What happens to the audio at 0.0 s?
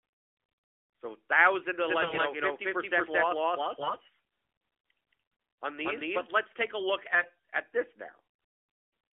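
Nothing goes wrong at 0.0 s: the speech starts intact, carried through the AMR narrowband mobile codec with its usual telephone-band character and no fault at that moment.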